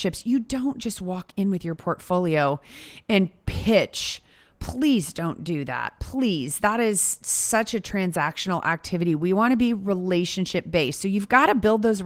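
No technical faults are audible.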